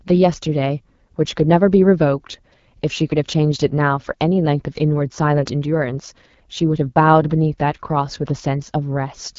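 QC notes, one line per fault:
Throughout: AMR wideband (HD Voice) codec. The speech has a rough, raspy edge that's plainly audible, which fits AMR-WB running at one of its lowest rates, something like 8.85 kbit/s. At that rate the model of the vocal tract and its pulse excitation doesn't get enough bits, so the voice comes out grainy. Up top it's thin: detail is modelled only to about 6.4 kHz, a band of shaped noise stands in above that, and nothing reaches past about 7.4 kHz.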